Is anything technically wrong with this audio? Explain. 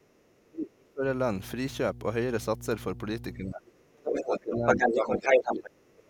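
Yes. A steady low 60 Hz tone runs through the whole clip, fairly loud at roughly 10 dB below the speech. This is mains hum, where a ground loop or a nearby transformer lets the power line bleed into the signal path.

From the start to 1.04 s, and again from 3.34 s to the end, the talker's speech sinks sharply, dropping by around 30 dB at worst in the first stretch and about 25 dB in the second. This is likely speech suppressed in double talk: with both sides talking, the echo canceller could not tell its own talker from the loudspeaker echo and pulled the level down.

A second voice comes through from 4.05 to 4.4 s, slightly below the talker, and again from 4.67 to 5.7 s, where it rises above the talker's own level. This is likely the other side's voice leaking through, with the far end played on a loudspeaker and not fully cancelled from the microphone.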